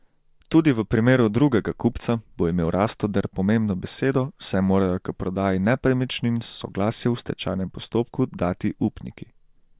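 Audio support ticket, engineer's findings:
No fault found on the speech clip. Nothing in the signal chain flagged for follow-up.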